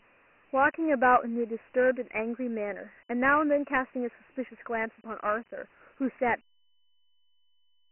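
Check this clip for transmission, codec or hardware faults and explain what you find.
One codec fault runs through the whole speech clip, and the fade-out near 6.4 s is a clean edit rather than a fault.

Dialogic VOX ADPCM, throughout: each sample is coded as a 4-bit step from a prediction. At about 24 kbps this fits 6,000 samples a second, so nothing survives above 3 kHz. Heavy quantisation leaves a gritty hiss that follows the speech and dulls it.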